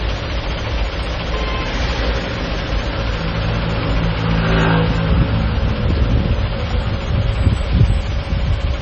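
Heavy MP3 compression runs throughout, likely at a bitrate near 24 kbps. Nothing sounds above 8.5 kHz. Weak detail flickers, giving a watery, swirly texture.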